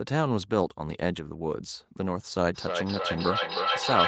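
From 2.54 s on, feedback echo between two devices loops the speech back roughly every third of a second, ringing, peaking about 2 dB louder.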